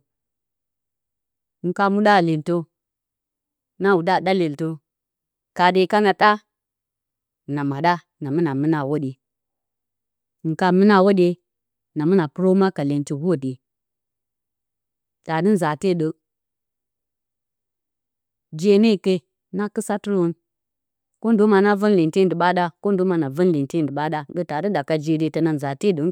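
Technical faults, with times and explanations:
No technical faults can be heard in this recording.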